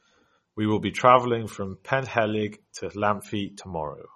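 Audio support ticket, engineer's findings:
Throughout the speech. Watery, swirly texture. Smeared consonant attacks. Nothing above 12.4 kHz. Likely MP3 compression at low bitrate, consistent with about 32 kbps. Encoder short of bits. Treble cut at fixed frequency. Weak frequency lines zeroed, flickering frame to frame. Damage plainly audible.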